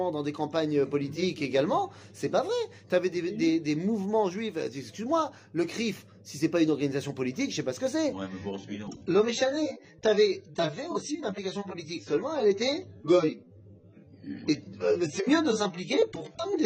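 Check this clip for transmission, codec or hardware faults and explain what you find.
From 8.13 s to the end, the top of the sound falls away suddenly and without any gap, leaving nothing above about 8.4 kHz, with a duller, smeared and warbly quality as codec artefacts rise. This is an adaptive stream at a lower bitrate: when the connection slowed, the player switched to a smaller AAC encoding, and the loss of detail points to a drop from around 96 kbit/s to around 16 kbit/s.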